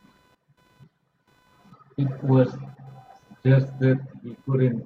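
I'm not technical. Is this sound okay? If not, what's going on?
No. A faint, fast buzz sits under the speech from start to finish. This is computer activity noise. The computer's own workload disturbs the shared electrical ground of the audio circuit. That gives a buzz pulsing around 500 times a second.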